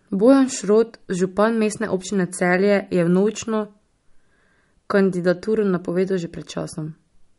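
Speech with MP3 compression throughout: treble stops at 11.2 kHz and weak detail swirls watery, unlike a plain low-pass, fitting a likely low bitrate near 48 kbps.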